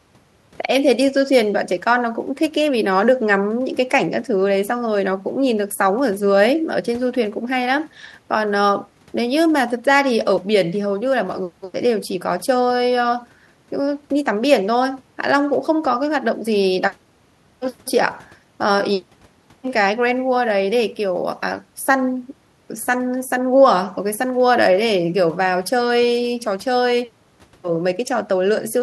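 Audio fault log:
Listening through this speech recording, nothing stood out as a technical problem at any point.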